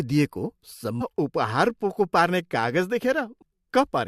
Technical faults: damaged data in a compressed stream

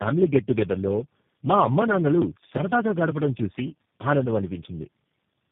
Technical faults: tandem speech coding

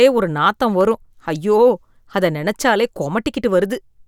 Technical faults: block of digital silence

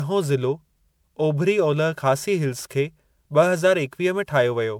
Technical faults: generation loss

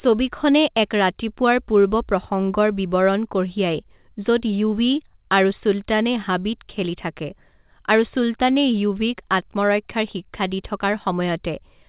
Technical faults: none

